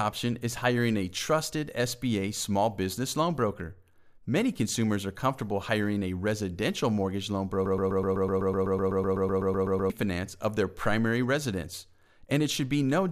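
Just after "a residential mortgage loan", at 7.66 s, a broken-record loop begins. A 126 ms fragment repeats exactly, back to back, 18 times, until 9.90 s. The stream likely stalled and kept replaying its last fragment. Speech resumes at "of their primary residence". The audio between is lost.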